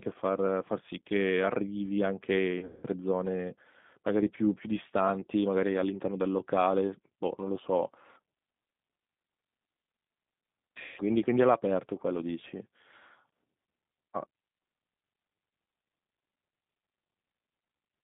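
Speech plays through a G.729 codec the whole way. It sounds rough and synthetic, band-limited to roughly 150 Hz to 3.7 kHz, which fits 8 kbit/s G.729A. VoIP packet loss concealed by the speech codec strikes twice. From 2.59 to 2.86 s, about 210 ms goes missing, including one 180 ms run. From 10.83 to 11.02 s, about 150 ms is lost. Each gap turns into a fading buzz or coloured noise as the decoder stretches the last sound it received.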